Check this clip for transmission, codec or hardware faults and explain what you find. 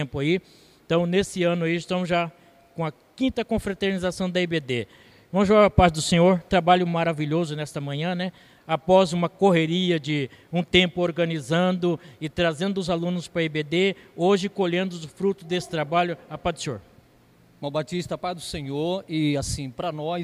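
Nothing in the clip points to a fault anywhere along its path. No event turns up that would need a time or a mechanism to explain it.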